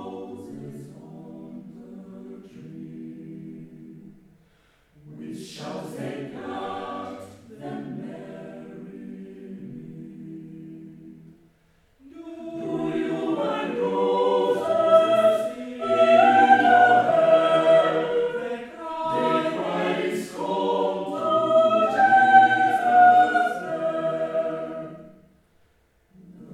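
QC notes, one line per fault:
Nothing stood out on listening; no faults to log.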